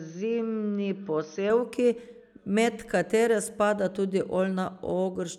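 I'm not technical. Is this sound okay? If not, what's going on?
No. Input switched to a poorer device, from the start to 1.5 s. The speech sounds dull, missing its crisp highs above 6.2 kHz, with faint added background noise. A lower-quality microphone was likely in use briefly, then the clearer sound returned seamlessly.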